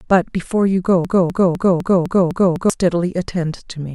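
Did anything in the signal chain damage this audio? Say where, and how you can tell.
Yes. From 1.05 to 2.70 s, a 0.25 s fragment repeats seven times back to back: a broken-record loop, likely from a stalled playback or stream buffer replaying its last chunk.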